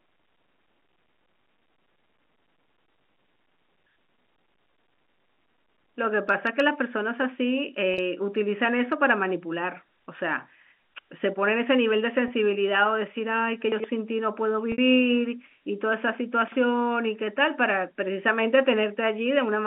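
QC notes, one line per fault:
7.94 s, 12.28 s and 14.72 to 14.78 s: packet loss with pitch repetition. Gaps of 40, 20 and 60 ms got bridged by looping the last pitch period, so the two short ones come across as a briefly held, buzzy tone, and the 60 ms one starts to fade before the sound cross-fades back in.
13.72 to 13.84 s and 16.48 to 16.56 s: chunks out of order. A 40 ms chunk landed two chunks late in the first spot and one chunk late in the second, so nothing's missing but the sequence is scrambled, giving a jumbled blip.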